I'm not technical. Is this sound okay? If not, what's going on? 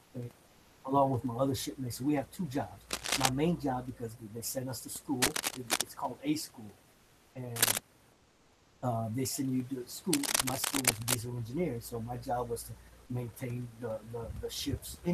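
No, there are two problems here.

The first is comfort noise in place of the background, from 0.04 to 0.14 s and from 8.12 to 8.82 s. The natural room sound drops out and gets replaced by a flat, featureless hiss that's a little quieter. The likely cause is the connection pausing the audio when nobody's talking, with the receiving end filling the gap with fake noise.

The second is cable scratch noise, a burst of rough scratching or rustling that sits right on top of the talking. It happens at 2.90 to 3.29 s, 5.22 to 5.82 s, 7.56 to 7.78 s and 10.13 to 11.15 s. It's louder than the voice each time, and loudest at 7.56 s. It's likely a worn cable or plug being jiggled.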